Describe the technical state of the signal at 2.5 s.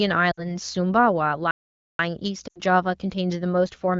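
Lost AMR speech frames, 2.48 to 2.58 s. The decoder reuses the last good pitch and vocal tract settings at falling gain. The sound drops to near silence within two frames.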